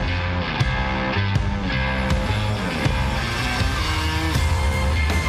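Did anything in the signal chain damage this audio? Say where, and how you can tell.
Yes, DAB burbling from 2.56 to 2.95 s, at the reception and codec stage. Bit errors of a few tenths of a percent slipped past the channel error correction and corrupted the MP2 audio data, giving the decoder wrong samples and scale factors. Individual sub-bands jump in level for up to a frame at a time across 21 frames, so short blips of noise in single sub-bands ride over the audio.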